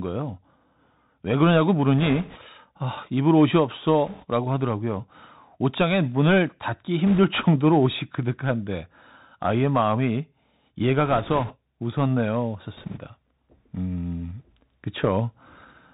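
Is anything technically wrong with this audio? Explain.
Yes. The whole clip of speech passes through a Bluetooth CVSD headset codec, which fits a 64 kbps headset link. The one-bit delta coder caps the bandwidth at 4 kHz, so the speech sounds boxy. Its adaptive step lags on loud high content, leaving scratchy s sounds and a grainy hiss. Unlike a muffled low-pass filter, this is rough and gritty.

Bit errors on the Bluetooth voice link appear at 1.99–2.39 s, 4.06–4.25 s, 7.07–7.19 s, 11.06–11.55 s and 12.77–13.00 s. A few percent of bits flip, and since each CVSD bit nudges the level only slightly, the result is a rushing crackle rather than the sharp clicks of dropped packets.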